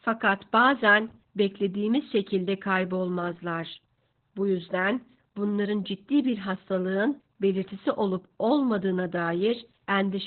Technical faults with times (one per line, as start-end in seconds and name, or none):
0.00-10.27 Opus voice compression